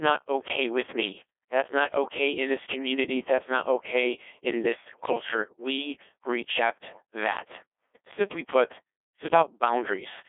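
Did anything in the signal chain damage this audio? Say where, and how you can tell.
Yes. The damage is at the codec stage: the speech went through a Codec 2 vocoder that sends only pitch, voicing, energy and a spectral envelope, never the waveform itself. The decoder rebuilds the voice from sine waves, so across the whole clip it sounds robotic and buzzy, with heavy codec damage, which fits a very low mode near 1.2 kbit/s. The band is narrowed to a 300 Hz to 3.5 kHz line, with nothing above 3.8 kHz.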